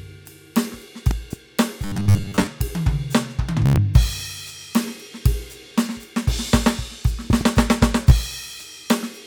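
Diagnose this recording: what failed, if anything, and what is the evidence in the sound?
In the analogue wiring, a voltage step, likely from a plug, switch or static discharge, entered the signal path. This loud pop fault appears as a double pop at 1.11 to 1.35 s and again at 7.30 to 7.43 s, each about 10 dB above the music, which carries on underneath.

At the driver or buffer stage, fresh audio arrived too seldom from 1.85 to 2.47 s, so the same short block was likely replayed. This gives robotic sound from repeated short buffers, a rigid 100 Hz buzz that fits a 10 ms buffer. Most of the music in that span is replaced by repeats.

The wireless link dropped packets, and the receiver replayed its last buffer to fill the gaps. This Bluetooth stutter shows at 3.66 to 3.78 s, where about 102 ms is lost over 116 ms, with one gap of 87 ms, heard as a run of repeated slices. A single 15 ms gap follows at 8.10 s.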